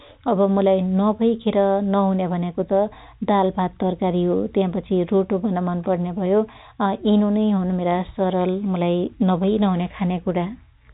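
No technical faults occur in this speech, which carries the narrow, telephone-band sound of G.711 coding with nothing above roughly 3.8 kHz.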